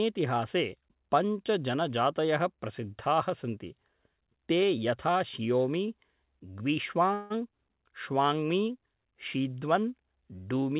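At 7.14 s the speech stalls until about 7.32 s. This is a call audio freeze. The last sound is stretched into a fading buzz or hiss for roughly 160 ms. Then the speech resumes from exactly where it stopped. Nothing seems to be lost. The audio is simply pushed later. The likely cause is packets held up in transit, so the jitter buffer ran dry. The narrow call band, with nothing above 4 kHz, fits a G.711-style codec.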